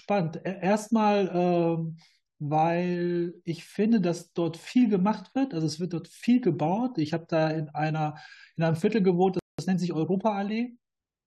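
A short speech recording with one rebuffering stall at 9.39 s: playback drops to silence for about 0.19 s, then continues exactly where it stopped. Unlike a dropout, nothing is skipped; the gap only adds time.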